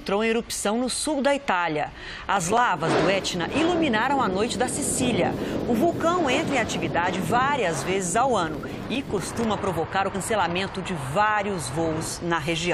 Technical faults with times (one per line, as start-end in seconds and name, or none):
2.33-2.61 processor overload crackle
8.54-9.44 processor overload crackle
10.14 compressed frames skipped